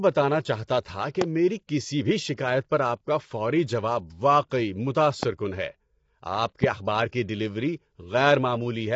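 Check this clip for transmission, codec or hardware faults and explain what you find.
Two faults are present in this speech clip: low-delay AAC compression running throughout, and two loud pops.

Low-delay AAC compression, throughout: the voice is plainly rough and grainy, with noise filling the gaps between harmonics and a synthetic-sounding top band. This is likely AAC-ELD, the video-call codec, coding each short frame at a rate that fits about 24 kbps.

Loud pops, at 1.21 to 1.24 s and 5.23 to 5.26 s: each is a single sharp pop roughly 20 dB above the speech, while the speech continues underneath. The likely cause is a sudden voltage step or pulse from a plug, switch, static discharge or driver glitch.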